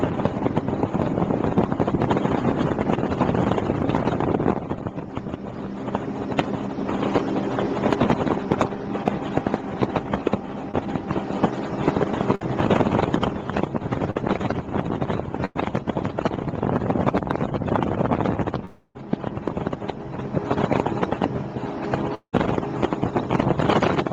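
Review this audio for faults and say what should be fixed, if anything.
Short concealed packet loss occurs at 10.71 to 10.75 s and 14.11 to 14.17 s. Each is a brief smear or wobble. About 20 ms of audio is missing at the first and about 40 ms at the second. The receiver hid each hole by extending the preceding sound, then blended back into the real signal. A short transient there can vanish. A larger jitter buffer would let late packets arrive in time.

A burst of packet loss hits at 12.35 to 12.43 s and 15.45 to 15.57 s. Several packets in a row were lost. The receiver continued the last sound and faded it, so you hear a held buzz or a fading hiss. About 60 ms is gone at the first and about 100 ms at the second. The audio then resumes later. Forward error correction or redundant packets would cover bursts of this length.

Two long gaps sound like a long network dropout. The first runs from 18.65 to 18.97 s and the second from 22.15 to 22.35 s. 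In each, the last sound stretches into a fading buzz or hiss, followed by a short silence. The silence is about 20 ms in the first gap and about 80 ms in the second. About 300 ms and 180 ms of audio are missing. The likely cause is a stall in the connection. A more stable link or adaptive bitrate would help prevent this.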